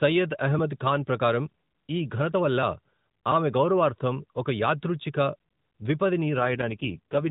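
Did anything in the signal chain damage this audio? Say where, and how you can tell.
Yes, at the network stage, where a weak radio link forced an AMR rate drop from about 6.38 s to 7.30 s. The AMR narrowband mobile codec runs at light damage before that point. At 6.38 s the speech turns rougher and buzzier, the kind of synthetic texture that fits a fall from 12.2 kbps to 4.75 kbps. Fewer bits remain to describe each 20 ms frame. The band stays capped below 4 kHz and there is no gap.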